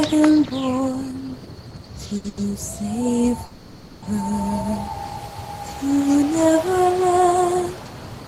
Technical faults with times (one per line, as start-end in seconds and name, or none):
2.17-2.39 short stall from a late packet
3.45-4.04 call audio freeze